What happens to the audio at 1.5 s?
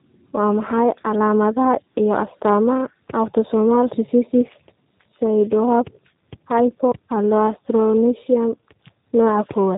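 Tandem speech coding is audible at 1.5 s, as it is across the whole clip. The speech has passed through two speech codecs in succession, consistent with a G.726 ADPCM link followed by a low-rate G.729A stage, so the second coder re-encodes already degraded output. The errors compound. The speech sounds rough, muffled and warbly, with nothing above 3.8 kHz.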